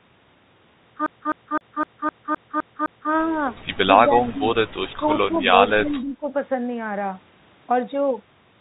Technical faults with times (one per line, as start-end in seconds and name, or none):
1.06-3.12 CD stuck on one turn
4.08-4.47 speech suppressed in double talk
4.98-6.33 speech suppressed in double talk